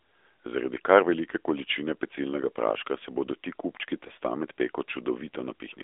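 Speech heard through an AMR narrowband mobile codec, band-limited to roughly 300 Hz to 3.6 kHz, with buzzy, synthetic damage that fits a mid-rate mode near 10 kbps, unlike simple low-pass filtering. At 4.08 to 4.11 s, lost AMR speech frames cause a brief warbling dip that sounds like one concealed 20 ms frame, not a hard dropout or click.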